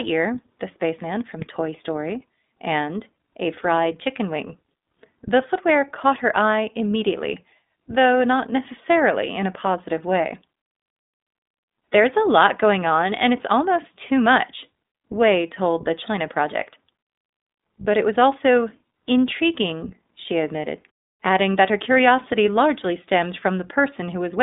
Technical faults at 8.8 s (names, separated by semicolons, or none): iLBC codec